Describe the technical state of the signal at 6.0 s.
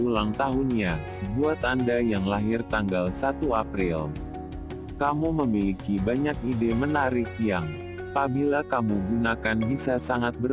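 At 6.0 s the signal is intact, with no dropout, clipping, distortion or other fault present at that moment.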